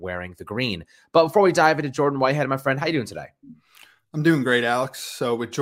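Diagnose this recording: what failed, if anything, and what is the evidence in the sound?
Nothing in the signal chain seems to have failed here; the speech comes across with no audible problems anywhere along the way.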